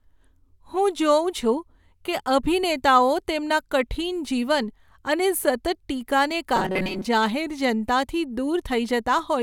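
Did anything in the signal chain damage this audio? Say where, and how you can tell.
Yes. At the driver or buffer stage, audio likely arrived too seldom, so short buffers were replayed while most of the real signal was skipped. From 6.56 to 7.05 s the speech becomes robotic sound from repeated short buffers, a rigid metallic buzz at 188 Hz.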